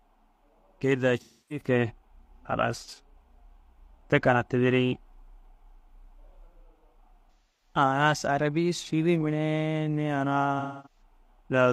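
Speech with AAC frame loss with concealment at 1.20–1.65 s, 7.31–7.74 s and 10.59–11.02 s. Audio of about 0.30, 0.30 and 0.26 s is missing. The decoder stretches the last good spectrum, so each patch sounds smeared or noisy. The second ends just before "arabi sûdi mire".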